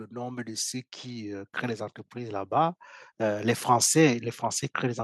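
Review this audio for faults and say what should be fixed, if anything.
Automatic gain rising: the gain control judged the input too quiet and ramped up, lifting speech and background together by about 6 dB from 0.08 to 1.58 s and about 5 dB from 2.13 to 3.7 s. Fixing the input gain at a suitable level and disabling or slowing the automatic gain control would prevent these swells.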